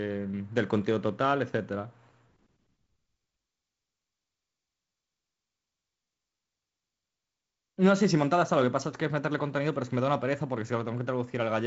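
No technical faults can be heard in this speech, which carries the band-limited character of G.722 wideband telephone coding, with nothing above about 7.7 kHz and only light coding grain consistent with its 48 kbit/s mode.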